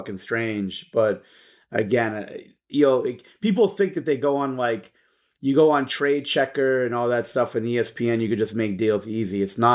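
Nothing in this bit of speech trips the ear at any point; there's simply no technical fault to point to here.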